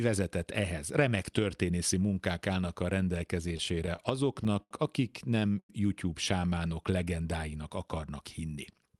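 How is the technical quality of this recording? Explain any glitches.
The recording is speech carried over a call path whose codec cuts the highs at 12 kHz, and several timing glitches from late packet delivery interrupt it.

Repeated stalls (stutter), 3.48 to 4.72 s: packets kept arriving late, draining the jitter buffer eleven times. The receiver extended the last sound each time, for up to 78 ms and about 16% of that span, so the speech drags and stutters.

Short stalls from late packets, 5.40 to 5.43 s and 5.59 to 5.70 s: a packet missed its slot, so the receiver held the previous sound until it arrived. The first hold is 19 ms and the second 96 ms, each heard as a briefly frozen sound with a faint buzz or dip.

Jitter buffer slow-down, 6.40 to 6.83 s, just before "legendáinak akarnak": to rebuild its reserve, the buffer repeated single pitch periods, adding 70 ms. The speech runs at 86% speed without changing pitch, so it sounds drawn out.

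Jitter buffer speed-up, 8.74 to 8.99 s, right after "legendáinak akarnak": the buffer held too much audio and trimmed short pitch-period slices, a few tens of milliseconds in total. The speech runs at 113% speed at the same pitch and sounds hurried.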